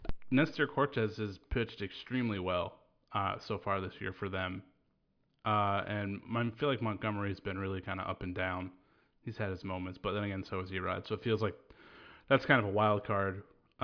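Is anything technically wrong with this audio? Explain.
No, nothing technically wrong stood out on listening to this speech recording.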